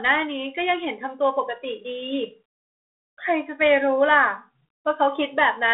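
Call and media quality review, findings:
No faults found here, just ordinary telephone-band audio that tops out around 3.8 kHz and carries the light coding texture you'd expect from a 32 kbit/s line.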